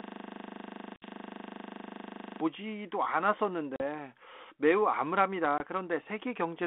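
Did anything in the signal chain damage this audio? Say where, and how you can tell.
Yes. From the very start of the clip until 2.41 s there is a system hang loop in the driver or buffer stage. It is already under way at 0 s. One 40 ms slice of sound repeats exactly, nearly sixty times, producing a rigid stutter-buzz at 25 Hz. The host or driver stalled while the audio hardware kept replaying the same ring buffer. The loop length fits a buffer of about 40 ms.

There is also packet loss on an ADPCM call at the network stage. Hard-edged silent gaps occur at 0.96 to 1.05 s (60 ms), 3.76 to 3.81 s (40 ms) and at 5.58 s (20 ms). These durations point to roughly three, two and one lost 20 ms packets. The G.726 decoder's adaptive predictor and step size drift out of step with the sender during each hole, so the sound comes back slightly distorted until it resynchronises over the following tens of milliseconds. 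The codec itself, heard as a 250 Hz to 3.5 kHz line band with light ADPCM roughness consistent with 32 kbit/s, is not the source of these faults.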